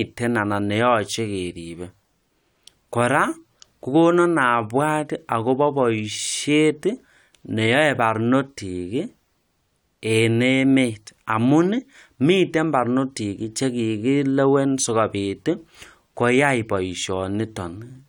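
No technical faults can be heard at any point in the recording.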